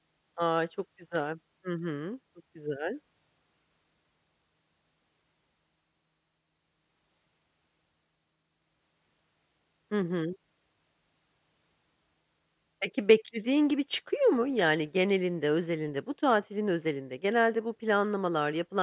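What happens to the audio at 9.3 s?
Nothing goes wrong at 9.3 s: the audio passes through that moment intact, with no dropout, click, glitch or other fault.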